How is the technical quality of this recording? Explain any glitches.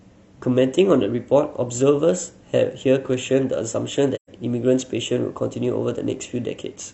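The recording has one audible glitch, a short dropout in the speech.

AAC frame loss with muting occurs from 4.15 to 4.30 s. About 128 ms of coded audio went missing, which fits a run of roughly three AAC frames, and the decoder filled the gap with silence by zeroing the spectrum. Because AAC frames overlap and are blended, the speech fades out into the hole and fades back in rather than cutting abruptly, so it sounds like a brief soft-edged gap.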